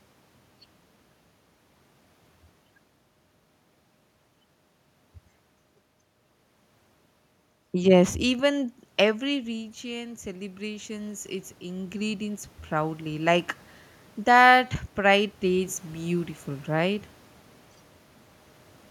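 In this speech recording, from 8.26 s to 13.53 s the voice and the room noise behind it swell up together, slowly, over about five seconds. That is automatic gain rising. Around 9 s the talker seems to move away, so the level at the microphone falls by about 11 dB. The automatic gain control responds by gradually adding about 9 dB, which lifts the background noise along with the voice.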